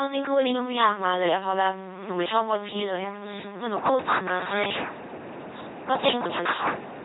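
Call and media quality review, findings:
LPC-10 vocoder on speech path, throughout. Heavy codec damage; bandwidth consistent with a 2.4 kbit/s parametric coder. Each frame is resynthesised as either pulse-driven buzz or pure noise through a ten-pole filter, so speech comes out robotic and buzzy, with stray hiss or buzz at misjudged voicing, and nothing above 3.9 kHz.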